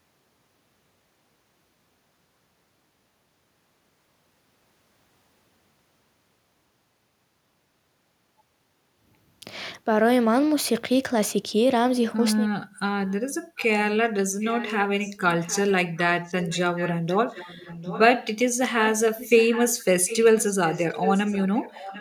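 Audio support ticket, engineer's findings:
Delayed copy of the voice, about 0.75 s behind: brief scraps at 13.06–13.14 s and 13.57–13.65 s, then sustained 14.41–18.0 s and 18.79 s to end, rising from barely audible to clearly present. Echo leak, likely far-end loudspeaker pickup incompletely removed by its echo canceller.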